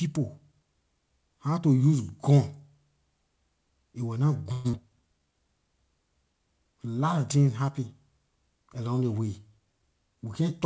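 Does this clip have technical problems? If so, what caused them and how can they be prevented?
Yes. The clip, which is speech carried over a call path with the band limit at 8 kHz typical of G.722, has three faults.

Long network dropout, 4.52 to 4.75 s, just after "it wor nah": audio most likely stopped arriving from the network, so the receiver had nothing to play. It stretched the last sound into a decaying buzz or hiss for about 0.21 s, and roughly 100 ms of speech never came back. When audio resumed, that piece was simply gone, and the delay had shifted by around 50 ms. A steadier network link, or redundancy and forward error correction on the stream, would prevent this.

Jitter buffer slow-down, 4.90 to 5.33 s: right after the gap, the jitter buffer was short of audio and needed to rebuild its reserve. It repeated individual pitch periods many times, adding about 90 ms, so this stretch plays at 81% speed. 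The pitch stays put while syllables are drawn out. Fewer losses upstream, or a buffer that refills more gradually, would avoid it.

Jitter buffer speed-up, 9.52 to 10.60 s: near the end, the buffer held more audio than its target, as happens when late packets arrive in a bunch. To trim the excess delay, it cut out short pitch-period slices repeatedly, removing roughly 100 ms. The speech runs at 109% speed with unchanged pitch and sounds hurried. Smoother packet delivery, or gentler delay adjustment in the buffer, would prevent this.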